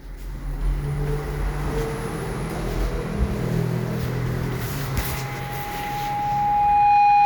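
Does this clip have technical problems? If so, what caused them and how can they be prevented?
Yes, there's loudspeaker feedback squeal from 4.94 s to the end at 7.25 s: an 823 Hz tone swelling over about two seconds to roughly 10 dB above the sound, as mic and speaker loop past unity gain. Cut monitor gain or reposition the mic.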